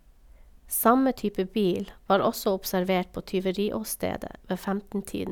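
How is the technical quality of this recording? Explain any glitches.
No glitches can be heard anywhere in this speech recording. There is nothing in it that calls for an explanation.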